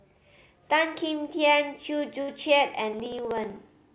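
At 2.22 s the audio hits a burst of packet loss lasting until about 2.30 s. The receiver covers the hole by stretching the last bit of sound for roughly 58 ms and letting it fade, so you hear a brief held buzz or dying hiss. Then the audio picks up further along, with about 60 ms of material skipped. Unlike a dropout tick, this is a single, longer event with an audible fill before the jump.

From 2.93 s to the end come periodic USB or driver dropouts, repeating every 63 ms, about sixteen times a second. Each time a background task stalls the audio path, and a sliver of signal is simply skipped rather than padded with silence. This gives a steady train of small ticks heard only while sound is present. What separates these from packet loss is their brevity and strict regularity, with no concealment tail. The whole clip is band-limited at 4 kHz, which fits the G.711 mu-law call path at 64 kbps.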